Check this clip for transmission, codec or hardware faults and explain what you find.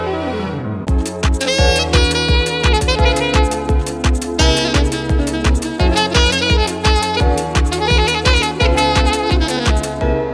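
One fault runs through the whole clip: a wrong sample rate. From start to finish the audio sounds hurried and shrill, pitched up by about 5.55 semitones and running 1.38 times faster than it should. Speed and pitch shift together by the same ratio because the samples are played back faster than they were captured, with no rate conversion. That ratio fits material recorded at 16 kHz being played at 22 kHz.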